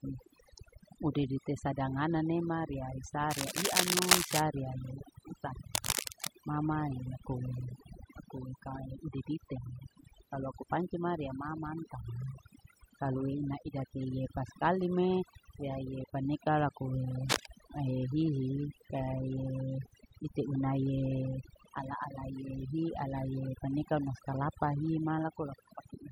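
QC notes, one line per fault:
Throughout: overdone noise removal. The background drops and breaks up into twinkling specks, and the speech has its quieter parts hollowed out. A noise reduction stage set far too hard is cutting individual frequency bands deep or off entirely whenever they sit close to its noise estimate. The softer components of the speech fall below that threshold too, so they vanish along with the noise.
3.30–4.41 s, 5.74–6.28 s and 17.29–17.48 s: cable scratch noise. Dense, uneven scratching and rustling sits over the speech. The first burst follows "sadangana nema riya isaa" and is somewhat louder than the speech. The second ends just before "mama e akue aku", and the third falls between "riya iye paneka lakue" and "mahe hihi kaie ite". Both are about as loud as the speech. The likely cause is a worn cable, connector or control being moved, so its contact resistance flickers rapidly and injects those ragged noise bursts.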